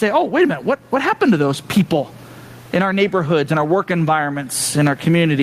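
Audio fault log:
throughout, gain pumping: gain likely set too high, with a fast limiter ducking loud sounds, so the gain swings by around 20 dB.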